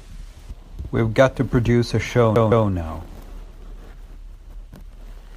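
At 2.35 s, right after "to produce a show", the audio sticks like a CD stuck on one turn: a 163 ms slice plays twice, until 2.68 s, each repeat starting after a tiny mute. A spectrogram shows identical blocks separated by thin silent seams.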